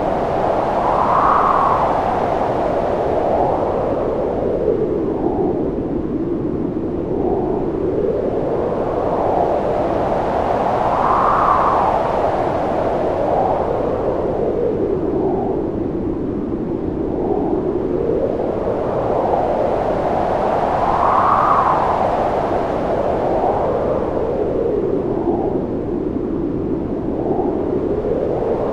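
Nothing stood out on listening to this recording of sounds.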